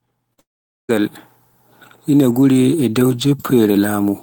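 At 0.33 s the speech briefly smears for about 40 ms, a short concealed packet loss. That slice of audio arrived too late to decode, so the receiver bridged the gap by extending the preceding sound. It is heard as a quick wobble or slur. On a spectrogram the sound runs on unnaturally flat and repetitive for a few hundredths of a second, and the waveform shows a short, too-regular stretch.

Immediately after, from 0.39 s to 0.91 s, the sound drops out for roughly half a second, most likely a long network dropout in which no audio reached the receiver. The concealment briefly carries on the last sound as a fading buzz or hiss, then about 0.45 s of silence follows before the speech resumes partway along, with about 0.5 s never played. On the waveform this is a near-flat gap, and on the spectrogram a dark blank band after a fading smear.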